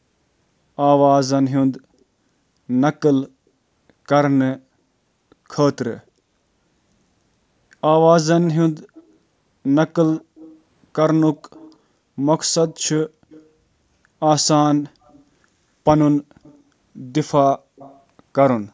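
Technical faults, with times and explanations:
8.44–9.15 s, 10.1–10.55 s, 11.54–11.76 s, 12.67–13.49 s, 15.04–15.21 s, 16.43–16.58 s and 17.76–18.0 s: echo leak. A faint copy of the speech trails it by 237 ms, roughly 25 to 35 dB down, in short scraps. This is likely a far end playing the call on a loudspeaker whose echo canceller failed to remove all of it.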